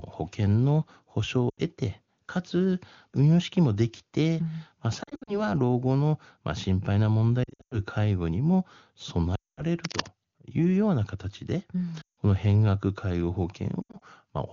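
Speech carried over an AMR wideband link, whose clean tone suggests its top rate, suffers lost AMR speech frames. Radio errors corrupted frames and the decoder concealed them by repeating the last good voice settings with falling gain. It is heard as fading, warbling gaps at 1.50 s (80 ms lost), 5.03 to 5.53 s and 7.44 to 7.80 s (scattered losses, runs up to 60 and 100 ms), 9.35 to 9.63 s (220 ms, fading toward silence), 12.01 to 12.18 s and 13.82 to 14.02 s. From 9.84 to 10.10 s, cable scratch noise adds dense, uneven scratchy rustling a little below the speech level, likely from a worn cable or connector being moved.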